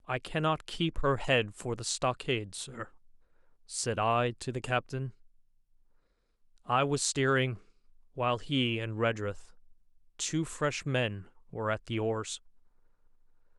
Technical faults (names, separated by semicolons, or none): none